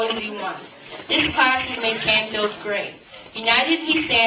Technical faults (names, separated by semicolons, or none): aliasing